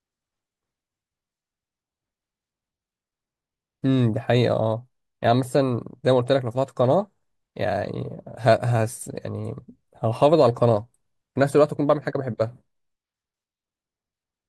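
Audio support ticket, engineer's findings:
Channel delay (comb filtering), 11.94 to 13.16 s: speech loses top-end air, slightly dull. One channel lags by roughly a single sample, about 0.02 ms, before mono sum. Shared content cancels near 20 kHz, so the first notch only trims the extreme highs.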